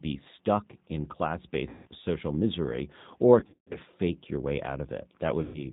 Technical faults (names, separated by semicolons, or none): G.729 codec; VoIP packet loss concealed by the speech codec